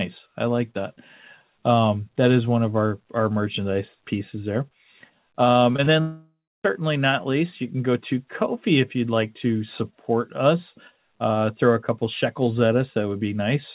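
Short concealed packet loss hits three times in quick succession: 5.72 to 5.76 s, 5.76 to 5.80 s, and 5.84 to 5.88 s. Each time about 20 ms of audio failed to reach the decoder in time. The receiver covered each gap by extending the preceding sound for roughly that span, then blended back into the real signal. The result is a quick smear and wobble, a slightly unsteady patch rather than a clean break.

A long network dropout follows from 6.00 to 6.66 s. About 0.64 s of audio never arrived, most likely from a network stall. The receiver first continued the last sound, which turns into a buzzy or hissy tail that fades out. About 0.29 s of near-silence then follows. The audio resumes at "not least you can", and whatever came before it in the gap is gone. All of this plays through a narrowband call path with nothing above 4 kHz, which fits G.711 A-law at 64 kbps.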